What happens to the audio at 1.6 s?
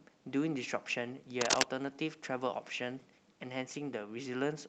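At 1.6 s the speech is near the end of a burst of cable scratch noise running from about 1.41 to 1.63 s. It sounds like a brief scratching rustle, noticeably louder than the speech. The likely cause is a worn cable or connector being moved, so its contact resistance jumps around rapidly. On a waveform this shows as a ragged cluster of irregular spikes. A spectrogram shows dense, broadband vertical streaks across that span.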